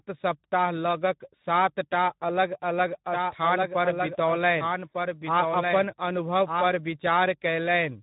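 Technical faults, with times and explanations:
Throughout, Speex codec: the speech sounds plainly hoarse and noisy, because this low-rate CELP coding, at a rate that fits around 11 kbps, leaves too few bits to model the excitation faithfully. Any content above 4 kHz is only a shaped noise fill.
3.12–6.68 s, doubled audio track: a second full-band copy of the speech runs roughly one second behind the original at about 5 dB lower, with no decay or room colour. It starts and stops abruptly, likely from a second, slower capture path mixed in.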